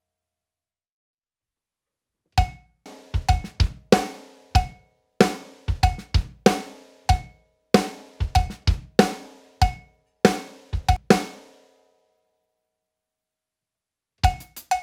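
Damaged data in the compressed stream makes the decoder misread frames and resync, producing brief chirps or blips in the audio at 2.86 s and 10.96 s.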